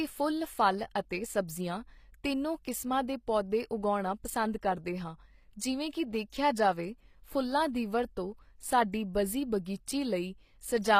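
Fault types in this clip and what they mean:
HE-AAC compression: Plainly audible throughout. The treble is rebuilt from lower bands and sounds gritty, with nothing above 15.5 kHz, likely from HE-AAC at a low bitrate.
Pre-echo: Codec noise leaks ahead of sharp attacks, leaving a brief 14 ms hiss just before onsets at 9.65 s and 9.86 s.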